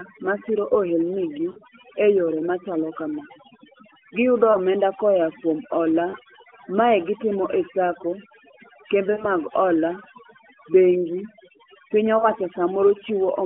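Overdone noise removal runs the whole way through: the denoiser was set so hard that it drops frequency bands sitting near its noise estimate, so the background drops and breaks up into little twinkling specks.

On top of that, at 1.52, 4.52, 6.10, 9.12 and 12.18 s there are lost AMR speech frames, the first one just before "e yore machalo". Each time the decoder repeated the last good pitch and vocal-tract settings with falling gain, giving a short smeared dip or warble. The gaps fit one to three lost 20 ms frames, with the longest at 9.12 s. The narrowband phone band itself is audible underneath.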